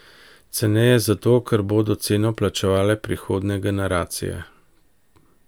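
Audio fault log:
No fault is heard in this audio.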